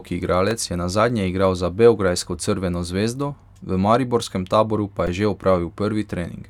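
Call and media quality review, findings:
Repeated buffer at 0.51 s and 5.07 s: playback starved, so the device replayed its last buffer of about 2.9 ms, which fits a 128-sample buffer. Heard as a click or brief buzz at 0.51 s and at 5.07 s, the latter from three back-to-back repeats.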